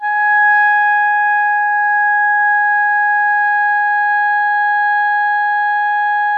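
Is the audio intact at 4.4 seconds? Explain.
No. Clock drift between sender and receiver runs through the whole clip. The sender's clock runs about 3% slow, so the receiver's jitter buffer keeps draining and the music carries a faint, persistent unevenness in pacing rather than a steady pulse.

Repeated timing corrections span 0.43 to 5.78 s, covering 4.4 s. The receiver stretches the audio to about 99% speed, adding roughly 70 ms overall by repeating short pieces. This is heard, if at all, as slight hiccups and a subtly wavering tempo.

Scattered short gaps fall between 2.51 and 5.22 s. About seven small holes, the longest around 15 ms, were each patched by continuing the preceding sound, roughly 100 ms in total. These register as brief ticks or smears in the music.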